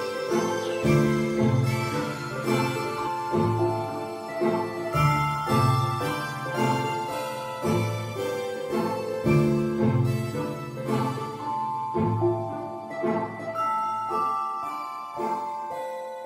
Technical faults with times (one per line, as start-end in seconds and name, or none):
3.06 compressed frames skipped